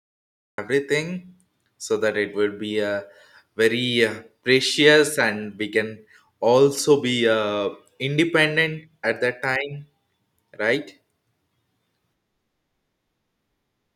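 Speech that opens with a cut-off start: the first 0.58 s is pure digital silence, and at 0.58 s the audio jumps straight into the middle of a sound with no attack or fade-in. Recording or streaming evidently began late. Unlike a dropout, the silence sits at the very head of the clip rather than interrupting running audio, and unlike a noise gate opening, nothing ramps up; the sound is already at full level.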